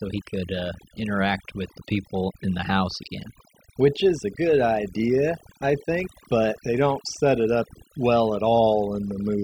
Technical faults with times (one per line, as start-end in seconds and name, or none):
0.00-9.43 overdone noise removal